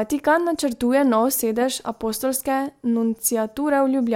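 Speech with no audible faults.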